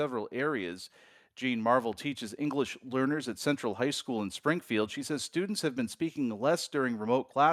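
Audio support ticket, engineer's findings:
No audible faults found on listening; no action needed.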